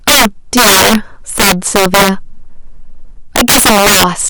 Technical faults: integer overflow

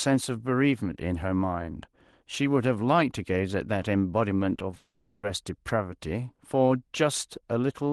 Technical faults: repeated packet loss (robotic sound); long network dropout

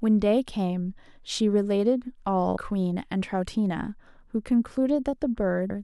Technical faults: damaged data in a compressed stream

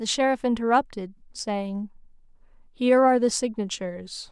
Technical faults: none

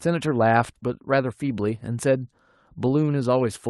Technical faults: none

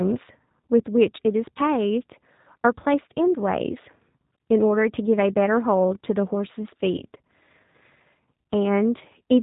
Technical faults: G.729 codec; VoIP packet loss concealed by the speech codec

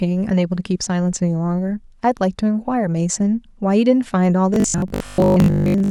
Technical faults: robotic sound from repeated short buffers

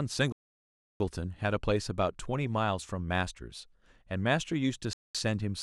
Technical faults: Bluetooth stall

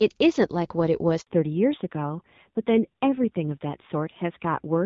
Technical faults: handover gap; fallback to narrowband

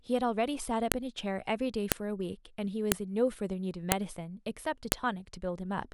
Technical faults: file header played as audio

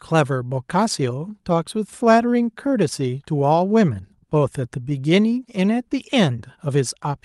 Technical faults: none

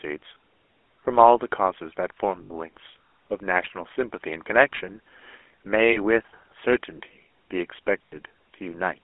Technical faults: GSM full-rate codec; lost GSM frames

